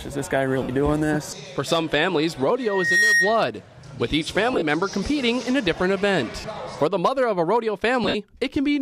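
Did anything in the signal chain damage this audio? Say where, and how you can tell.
Yes. The wireless link is the first stage at fault. Lost LE Audio frames leave short noisy smears at 0.63–0.69 s (60 ms), 6.40–6.44 s (37.5 ms), and across 4.53–4.62 s and 8.04–8.15 s, where 60 ms and 82.5 ms go missing in scattered runs, the longest about 70 ms. The LC3 decoder fills each gap by repeating the last spectrum with scrambled signs, so tones blur into hiss that fades as the gap lengthens. The losses come in steps that fit 7.5 ms frames. A plain dropout would give a hard silence or a click instead of this decaying smear.

The second problem happens at capture, in the acoustic loop between loudspeaker and microphone. A loudspeaker feedback squeal runs from 2.60 to 3.50 s. It is a single 1.9 kHz tone that rises out of nothing in under half a second and settles about 5 dB above the rest of the sound. 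The loop's gain exceeds one at that frequency, so the tone keeps feeding itself. Mains hum or a codec's tonal artefact would stay steady, not swell from silence like this.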